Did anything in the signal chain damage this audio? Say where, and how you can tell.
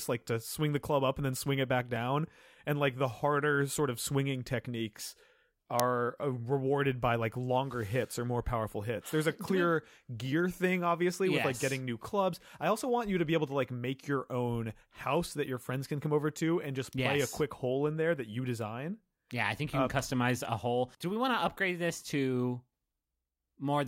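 Yes. At 5.80 s, just before "uh rewarded by like", there is a single sharp click, a loud crack standing out from the speech. Its length of about 0.73 ms fits a 32-sample block. This is an uninitialised buffer at the driver or buffer stage: one block was handed to playback before any audio had been written into it, so whatever stale memory it held was played out as samples.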